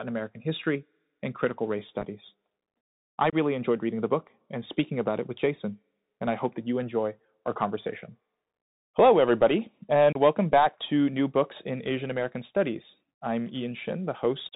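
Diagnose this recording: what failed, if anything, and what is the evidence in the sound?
The speech sounds narrow and phone-like, with scratchy s sounds, a granular hiss underneath and roughness on loud, bright syllables. This is the codec stage: a Bluetooth CVSD headset codec. At 64 kbps, its one-bit delta steps can't track fast high-frequency swings, and nothing above 4 kHz survives.

Three abrupt holes break the sound. At 2.00–2.07 s, after "history and critical race", about 22.5 ms drops out in scattered gaps over 60 ms, the longest 7.5 ms, so it sounds like crackle. At 3.30–3.33 s, before "enjoyed reading the book", and at 10.13–10.17 s, before "welcome back to", about 26 ms goes silent each time. This is unconcealed Bluetooth headset packet loss on the wireless link: missing packets were replaced with silence rather than concealed.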